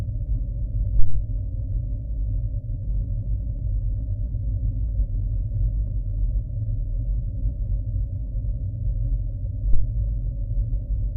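Two deep low-frequency thumps hit this everyday-sound recording, at 0.99 s (peaking near about -2 dBFS) and 9.73 s (near about -4 dBFS). Each is a phantom power thump, from a supply switching on a live input.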